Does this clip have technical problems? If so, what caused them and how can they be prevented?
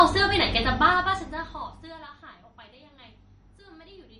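Yes. Throughout the speech there is plainly audible watery, swirling damage with nothing above 10.5 kHz, likely from MP3 compression at a low bitrate, which fits roughly 40 kbps. Starved of bits, the encoder drops the treble and zeroes weaker frequency lines, which flicker in and out between frames and smear consonant attacks. On a spectrogram this appears as a flat ceiling at 10.5 kHz with patchy, blotchy gaps below it. Keep an uncompressed or high-bitrate master, and encode at 128 kbps or more.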